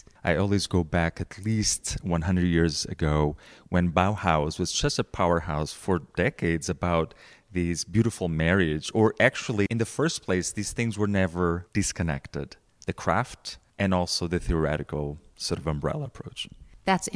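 No technical faults can be heard anywhere in this speech recording. Nothing in the audio calls for comment at any point.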